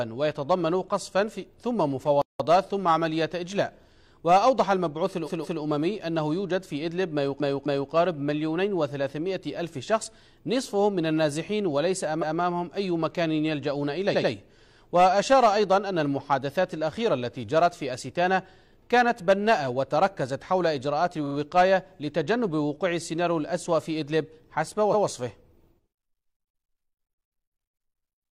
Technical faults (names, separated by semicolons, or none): playback stall; repeated frames